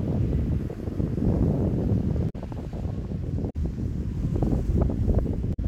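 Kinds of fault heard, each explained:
Damaged data in a compressed stream: corrupt bytes make the decoder misread frames and lose sync, giving three short glitches of about 0.1 s at 2.26, 3.46 and 5.50 s. Each shows as an abrupt break on a spectrogram and in the waveform.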